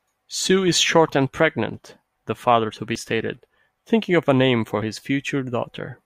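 A dropped buffer (overrun) shows up at 2.96 s, just before "stated thinking of a", and again at 4.82 s, right after "of a name for". Each is a jump where the speech skips forward with no gap, about 30 ms missing the first time and about 10 ms the second. The likely cause is the recording software not collecting its samples in time, so the hardware overwrote them and the surrounding audio was spliced together.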